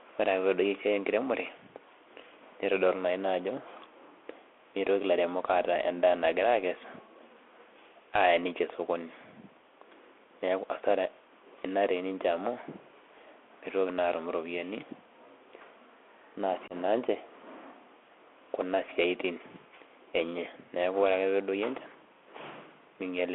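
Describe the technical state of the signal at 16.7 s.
Unconcealed Bluetooth headset packet loss occurs from 16.68 to 16.73 s. About 22.5 ms of audio, which fits a few lost headset packets, was lost between headset and phone, and silence or an idle pattern filled the gap with no attempt to cover it. The result is a short, hard-edged hole in the speech with abrupt boundaries. On this CVSD link the adaptive step size restarts after the gap, so the speech returns briefly quieter before it recovers.

Around that hole, the Bluetooth CVSD headset codec shapes the whole clip. The sound points to a 64 kbps CVSD link, which encodes each sample as a single up-or-down bit and adapts its step size as it goes. Its damage is plainly audible here. The band runs only from 300 Hz to 3.4 kHz, so the speech sounds thin and narrow. Loud, bright passages outrun the step and distort, s sounds turn scratchy, and a granular hiss sits beneath the speech.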